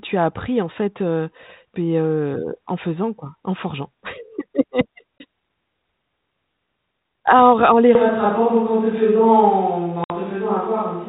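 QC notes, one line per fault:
5.18–5.24 s and 10.04–10.14 s, packet loss on an ADPCM call: hard-edged silent holes of 20 ms and 60 ms, the second about three packets long. After each hole the speech restarts slightly distorted while the decoder's predictor and step size regain step with the sender's. Unlike a plain dropout, this damaged restart settles within tens of milliseconds.
7.95 s to end, switch to a distant microphone: the speech abruptly turns roomy and hollow, loses bass, and gains background noise about 30 dB below it, though its level barely changes. The cause is likely a fallback to a farther microphone. Added reverb would not bring the sudden switch, the thinner bass or the noise. The light 32 kbit/s G.726 coding is heard alike before and after.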